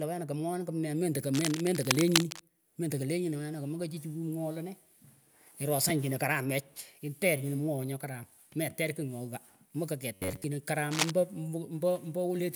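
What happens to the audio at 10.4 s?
At 10.4 s the speech is inside robotic sound from repeated short buffers, spanning 10.14 to 10.44 s. Most of it is likely one slice of about 10.7 ms repeated, forcing a rigid 93.8 Hz metallic buzz. Spectrograms show even 94 Hz harmonic lines; waveforms show repeating cycles.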